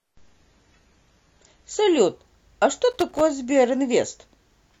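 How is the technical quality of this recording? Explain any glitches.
Two glitches stand out: a low-quality opening that clears up suddenly, and a short burst of crackle just afterwards.

Adaptive stream starting at a low bitrate, from 0.0 to 2.0 s. The player opened on a lean version of the stream to start quickly, then switched up once the connection was measured. Until the switch, the speech sounds dull and smeared, which fits about 32 kbit/s AAC. Then it brightens abruptly, with no gap, which points to a step up to around 96 kbit/s, with the sound still stopping at 14 kHz.

Loose connector crackle, from 2.91 to 3.21 s. A worn or dirty contact in the signal path made and broke rapidly as it shifted, chopping the audio for about 0.3 s. It is heard as an irregular scratchy crackle laid over the speech.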